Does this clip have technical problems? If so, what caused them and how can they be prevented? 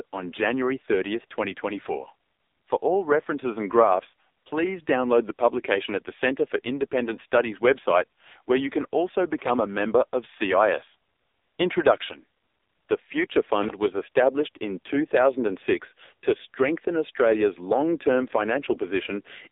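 Yes. Throughout, the speech is squeezed into roughly 300 Hz to 3.7 kHz with nothing above 4 kHz, and it sounds heavily buzzy and synthetic. That is AMR narrowband mobile codec damage, and the degree of damage fits a low mode near 5.9 kbps. Band-limiting alone would sound muffled but natural. Here the buzz comes from the codec rebuilding the voice from a vocal-tract model and a few pulses per subframe. Carrying the call over a wideband codec at a higher bitrate would prevent it.

At 6.55 s there is a single sharp click where the waveform jumps ahead, most likely from dropped samples, about one sample lost. It is one clean tick with no texture, which distinguishes it from connector crackle. Reliable buffering and clock handling in the capture chain would prevent it.

From 9.38 to 9.50 s, between "you can also" and "a member of", there is loose connector crackle. A contact briefly made and broke, chopping the signal into about 0.12 s of irregular scratching. 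It is a rough burst, not one isolated click. Clean, firmly seated connectors would prevent it.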